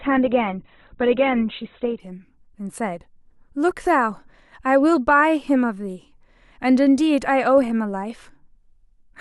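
From 0.0 to 2.0 s, an adaptive stream starting at a low bitrate muffles the speech, fitting about 12 kbit/s. The spectrogram stays empty above 4.2 kHz, then widens abruptly without a gap.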